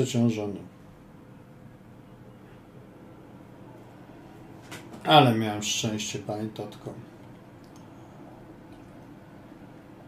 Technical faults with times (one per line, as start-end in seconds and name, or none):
none